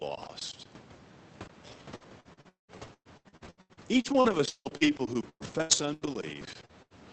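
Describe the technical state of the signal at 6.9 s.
At 6.9 s there is a burst of packet loss from 6.82 to 6.93 s. The receiver bridged a gap of 79 ms by extending the last sound and fading it down, then resumed with about 80 ms of audio skipped.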